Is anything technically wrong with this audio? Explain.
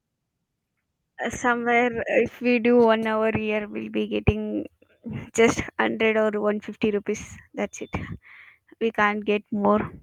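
No, there are no faults.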